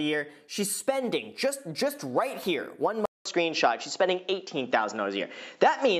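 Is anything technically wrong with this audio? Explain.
Yes. At 3.05 s the sound drops out for 200 ms, then returns duller, with nothing above 7.6 kHz, a level shift of about 5 dB and a new noise floor well below the signal. This is likely an input switched to a poorer device, whose narrower band and own character persist to the end.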